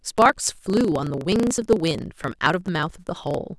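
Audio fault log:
Throughout: block size mismatch (truncated). One stage in the chain writes longer blocks than the next stage reads, consistent with 1024-sample blocks, so the tail of every block is dropped. Each cut leaves a small discontinuity, and these repeat to form a steady buzz at about 27.2 Hz under the speech. Because part of every block is discarded, the speech runs about 1.16 times faster than normal while keeping roughly its normal pitch.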